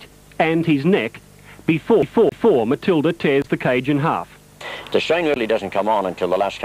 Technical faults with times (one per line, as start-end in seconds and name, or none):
2.02-2.56 CD stuck on one turn